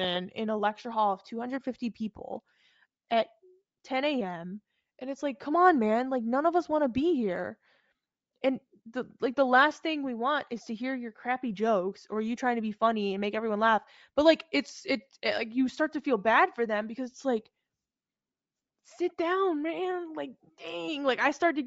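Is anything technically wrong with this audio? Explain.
Yes. Bluetooth LC3 compression damage runs through the whole speech clip and is plainly audible. The likely cause is the LC3 codec of Bluetooth LE Audio, which codes sound in short transform frames, and the damage here fits 10 ms frames at about 32 kbps. At such a low rate the encoder discards much of the upper spectrum and refills it with synthetic noise, giving the speech a breathy, grainy edge in place of clean high-frequency detail.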